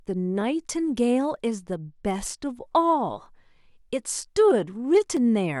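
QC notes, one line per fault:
0.41–5.17 s, clock drift buffer slips: a regular click every 0.95 s, likely from two clocks a few hundred ppm apart dropping or repeating about fifteen samples.
1.58–2.59 s, Bluetooth SBC bit pool drop: dulled treble and gritty noise, which fits the bit pool falling from 31 to 15 (about 105 kbps), starving upper sub-bands.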